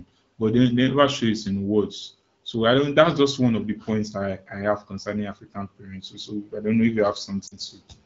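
Lost AMR speech frames occur from 7.47 to 7.58 s in this speech clip, right after "don't know if you". About 40 ms of audio failed to arrive intact, which fits two dropped 20 ms frames. The AMR-WB decoder, running at 12.65 kbit/s, covers the gap by repeating the last good pitch and vocal tract settings at falling gain. The result is a brief drop toward near silence in the voice, which then comes back weak or rough for a moment.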